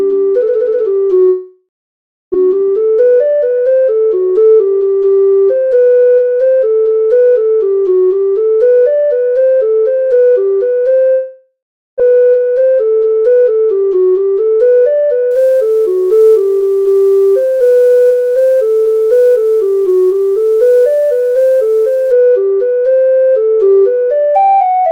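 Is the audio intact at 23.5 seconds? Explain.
Yes, the audio at 23.5 seconds is intact, with no dropout, click, distortion or other fault audible at that point.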